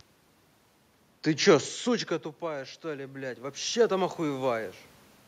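Automatic gain rising from 1.85 to 4.78 s in this speech recording: after the talker moves away near 1.5 s, the gain control slowly lifts voice and room noise together by about 8 dB.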